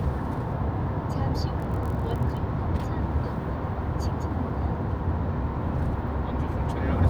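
From 1.58 to 2.40 s, a block size mismatch (padded) leaves zero-filled gaps in each 1024-sample block, giving a 43.1 Hz buzz with essentially unchanged speed and pitch.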